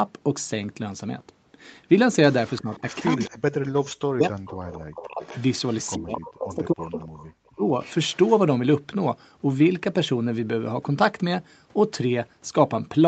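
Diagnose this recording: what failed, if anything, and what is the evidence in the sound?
The problem sits in call processing, on the far end's acoustic echo canceller. A faint delayed copy of the speech trails the talker by 260 ms at 2.46–3.3 s, 4.52–5.94 s, 6.54–7.25 s and 7.82–8.31 s. It sits about 20 dB under the main speech in the first two stretches and about 25 dB under in the last two. That's an echo leak: the likely cause is a loudspeaker on one end whose pickup the canceller didn't fully subtract, so it got sent back down the line.

The speech is also suppressed in double talk, again in call processing, from 2.61 to 5.22 s and from 5.97 to 7.66 s. Each span has roughly a second and a half of chopped, pumping dips, the deepest knocking the level down by something like 40 dB. This is likely the echo canceller or suppressor failing to tell the near talker from loudspeaker echo while both sides were active, then clamping everything.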